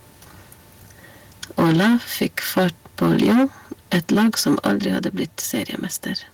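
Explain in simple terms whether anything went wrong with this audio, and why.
The speech runs into microphone overload three times: from 1.58 to 2.68 s, 3.01 to 3.45 s, and 3.92 to 5.07 s. The loudest bits sound harsh and crackly because their peaks get flattened, most likely from the mic's input being set too high, worst in the short middle stretch.

There's also a microphone volume step-down, at 1.6 s and again at 4.67 s. Everything, voice and background alike, suddenly gets a bit quieter in one jump. That's likely the call software noticing the distortion and turning the mic down a notch each time.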